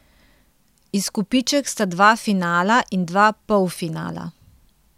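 No technical faults can be heard in this recording.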